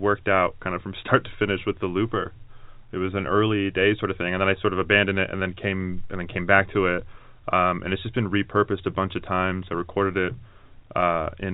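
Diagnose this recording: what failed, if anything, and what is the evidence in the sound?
Nothing in the recording points to a failure at any stage of the chain. The speech carries the sound of fixed-line G.711 telephone coding, with nothing above 4 kHz and a faint quantisation hiss riding about 38 dB under the signal and following its level, consistent with the A-law variant.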